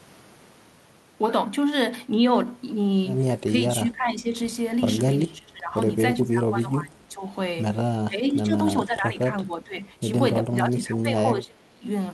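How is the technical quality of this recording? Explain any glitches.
The technical quality is compromised by repeated dips in the speech. From 3.5 to 4.33 s, 5.24 to 5.75 s, 6.19 to 7.32 s, 8.08 to 8.57 s, 8.79 to 9.85 s and 10.47 to 11.86 s, the voice sinks and thins, falling by around 10 to 20 dB at its worst. This is likely speech suppressed in double talk: with both ends talking together, the echo canceller mistook this talker for returning loudspeaker echo and pulled the level down.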